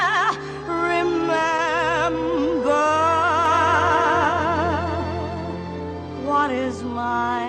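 From 3.46 to 6.46 s a doubled audio track appears: a second, somewhat quieter copy trails by about half a second, likely from a slower capture path, starting abruptly without the decaying repeats of echo.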